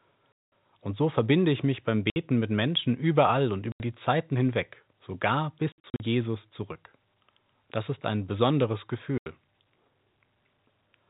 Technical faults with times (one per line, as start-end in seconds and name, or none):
0.33-0.45 packet loss filled with silence
2.10-2.16 packet loss filled with silence
3.72-3.80 packet loss filled with silence
5.72-6.00 packet loss filled with silence
9.18-9.26 packet loss filled with silence